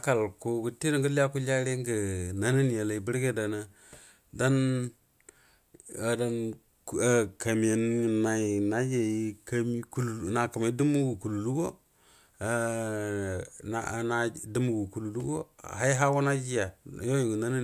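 No technical faults can be heard anywhere in the recording, which carries the speech on a steady, intact signal from its first moment to its last.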